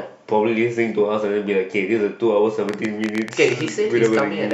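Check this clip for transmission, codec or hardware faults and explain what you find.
A train of clicks runs from 2.69 to 4.52 s: about twenty sharp, similar ticks at an uneven pace averaging 10.4 per second, standing well above the speech. Repeated pulses like this likely come from electrical interference or a faulty connection or power supply.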